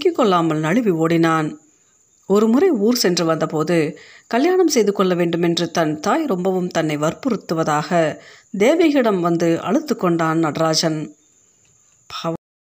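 At 12.36 s the speech just stops dead: a cut-off end. The final buffers never got written out, so the sound is chopped mid-syllable and drops straight to digital silence with no natural decay, leaving the last 0.39 s completely empty.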